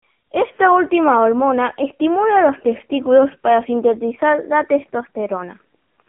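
Speech runs throughout through an AMR narrowband mobile codec: nothing above 3.5 kHz, a 200 Hz–3.4 kHz line band, and heavy buzzy, synthetic voicing that fits a low mode near 6.7 kbps. A simple telephone filter would narrow the band without that vocoder roughness.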